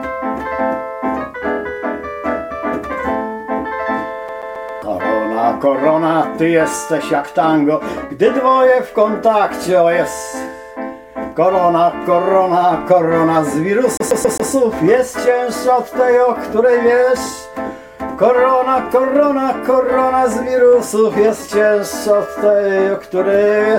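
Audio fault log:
4.28–4.82 s and 13.97–14.51 s: CD stuck on one turn. The same 0.13 s snippet repeats four times with a brief mute at each jump, a fast, even stutter.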